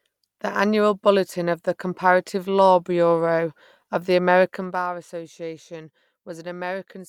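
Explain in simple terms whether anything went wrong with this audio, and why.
Yes, there's one problem, between 4.45 and 4.88 seconds, and it's called zipper noise. Right there the speech gets turned down, but the level drops in a staircase of small equal jumps, about thirty a second, instead of one smooth slide. Every jump leaves a tiny click, and that quick run of clicks comes across as a ticking, zipping sound sitting on top of the speech until the drop finishes.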